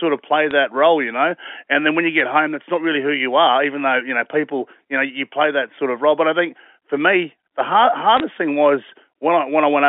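Bit errors on a digital phone line land at 0.51 s after "of play", at 2.20 s after "then when you", and across 8.17 to 8.20 s after "for me the hard". Flipped bits in the 64 kbps mu-law stream corrupt single samples.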